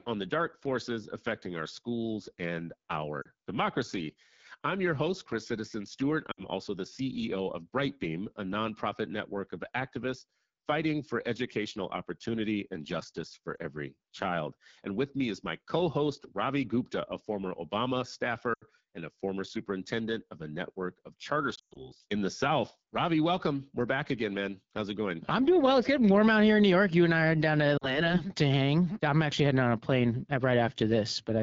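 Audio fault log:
throughout: AMR wideband (HD Voice) codec. The speech has a plainly audible rough, raspy grain, which points to one of the lowest AMR-WB rates, around 8.85 kbit/s. At that rate the pulse excitation is coded too coarsely, so the voice turns gritty. On a spectrogram the region up to 6.4 kHz shows smeared, buzzy harmonics, and the band from 6.4 to 7 kHz is a shaped wash of noise that does not follow the speech's own fine structure.
3.22 to 3.28 s, 6.31 to 6.44 s, 13.55 to 13.59 s, 18.54 to 18.65 s, 21.55 to 21.91 s and 27.77 to 28.11 s: lost AMR speech frames. The decoder filled the gaps by repeating the last good pitch and vocal tract settings at falling gain. The single lost frame at 13.55 s is a brief dip or warble. Around 21.55 to 21.91 s the losses are scattered over about 200 ms, with a longest run of 120 ms, so the sound drops to near silence within two frames. On a waveform this appears as an envelope that collapses quickly and then recovers weak. 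On a spectrogram the harmonics are frozen and flat before they fade.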